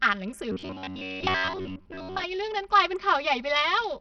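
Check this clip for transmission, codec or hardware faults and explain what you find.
Three faults are audible in this speech clip: comb filtering from a channel delay, heavy codec damage, and a robotic stretch from repeated buffers.

Channel delay (comb filtering) runs throughout. One channel trails the other by roughly 5 ms. When the two are summed to mono, shared content cancels at evenly spaced frequencies, starting near 100 Hz. The voice sounds hollow and phasey, with fixed notches.

Heavy compression also runs throughout. It is most likely Bluetooth SBC compression, and the damage fits a low bitrate around 64 kbps. Too few bits reach the upper sub-bands, and the rest are coarsely quantised. The treble flickers and drops out, and gritty noise rides on the voice.

From 0.52 s to 2.24 s, the speech turns into a robotic sound. This is likely repeated short buffers. New audio arrives too seldom, so the last few milliseconds are replayed, and most of this stretch is repeats. 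The repeats impose a rigid 93.8 Hz metallic buzz.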